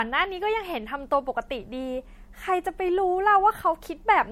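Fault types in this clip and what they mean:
Generation loss: The speech was likely run through a low-bitrate MP3 codec, around 64 kbit/s, about three times over. Each re-encoding quantised the signal again on a shifted frame grid, so the damage piled up. The result is a swirling, hollow, smeared quality beyond what a single pass at that rate would cause, with softened consonant attacks and no content above 16.5 kHz for the whole clip.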